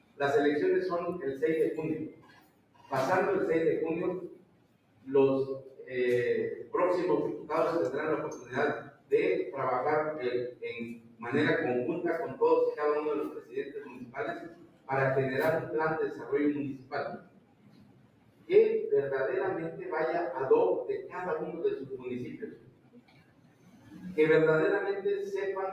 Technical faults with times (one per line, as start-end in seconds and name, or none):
0.00-25.72 noise suppressor applied to music or sounds
0.00-0.20 sound cut by the noise suppressor
2.04-2.92 sound cut by the noise suppressor
4.29-5.92 sound cut by the noise suppressor
8.35-9.12 sound cut by the noise suppressor
10.51-11.24 sound cut by the noise suppressor
13.29-14.89 sound cut by the noise suppressor
16.14-18.50 sound cut by the noise suppressor
21.81-24.05 sound cut by the noise suppressor